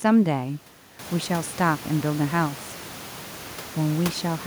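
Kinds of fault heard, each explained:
No technical faults can be heard in this speech clip. The room's background noise rises by about 14 dB at around 1 second and then sits about 17 dB below the speech, which belongs to the recording space rather than to the system.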